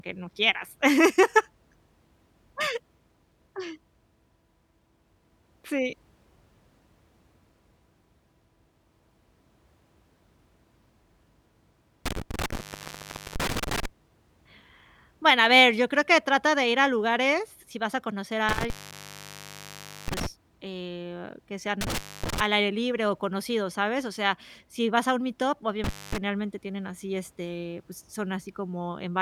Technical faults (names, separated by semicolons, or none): intermittent contact; block of digital silence